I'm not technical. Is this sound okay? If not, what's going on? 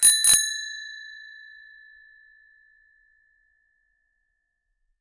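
Yes, this sound is okay, and there's nothing going on with it that needs attention.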